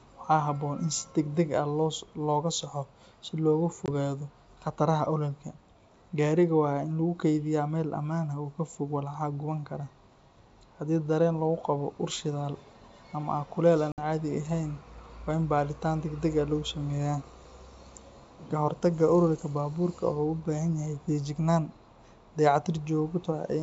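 This speech clip has two holes from packet loss on an ADPCM call, at 3.86–3.89 s (20 ms lost, about one packet) and 13.92–14.00 s (60 ms, roughly three packets). Unlike a plain dropout, sound resumes slightly distorted until the decoder's predictor resynchronises.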